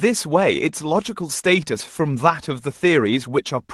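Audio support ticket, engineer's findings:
Skip ahead at 1.79 s. Speech jumps forward with no silence or fill, losing roughly 0.7 s of audio; the two sides join almost directly. Probable component: jitter buffer discarding queued audio on overflow, cutting latency in one step. Unlike a dropout or concealment gap, nothing is inserted and no hole is audible, only missing content and an abrupt join.

Jitter buffer speed-up, 2.54 to 3.53 s. Speech runs about 5% fast at unchanged pitch, slightly hurried. Around 70 ms removed in total, as many short cuts of one or a few pitch periods. Probable component: jitter buffer trimming excess delay after bunched packet arrival. Unlike a skip ahead, the loss is spread thinly, so no single jump is heard. Unlike resampling or clock drift, pitch stays put. Opus call path at 24 kbps carries the audio, with bandwidth up to about 12 kHz.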